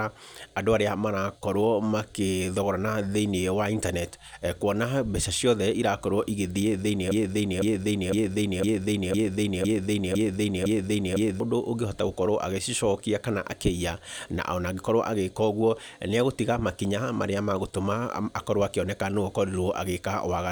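From 7.11 to 11.40 s there's a broken-record loop: a 0.51 s slice of speech repeats eight times back to back, likely a stalled stream resending its last fragment.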